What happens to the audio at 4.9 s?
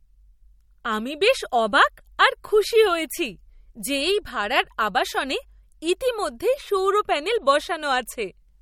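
At 4.9 s the speech has the same damage heard across the whole clip. It sounds watery and swirly, with smeared onsets and nothing above 17.9 kHz. The likely cause is MP3 compression starved of bits, consistent with about 48 kbps. The encoder cuts the treble and drops weak frequency components that flicker between frames.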